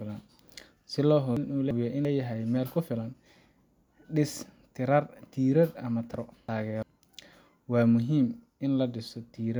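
At 1.37–2.05 s, just before "leeyahay meel ku filan", and at 6.14–6.83 s, after "tiirar ama", chunks out of order: a 0.34 s chunk plays one slot late, jumbling the speech.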